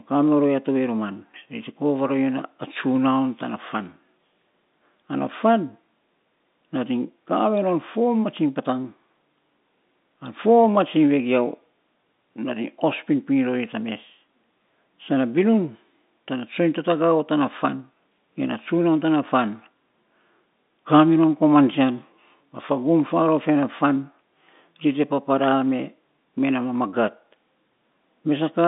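No technical faults are audible.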